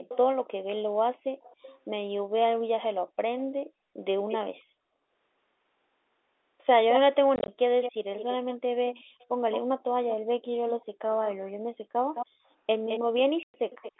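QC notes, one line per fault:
0.08–0.48, 1.42–1.79, 3.39–4.38, 6.89 to the end: echo leak. A delayed copy trails the sound by 277 ms early on, then 214 ms, likely speakerphone pickup the far end's canceller missed, and it sits about 15 dB under the speech, dips to about 25 dB under, then rises to nearly as loud.
7.36–7.48 and 13.43–13.54: packet loss filled with silence. First a scatter of short gaps, about 80 ms in all, then one solid 110 ms hole, consistent with 10 ms packets dropped and replaced by nothing.
9.04–12.45: background gated by the echo canceller. The room tone ducks in and out, up to about 40 dB down, for roughly a second and a half in total, as the canceller clamps the mic during playback.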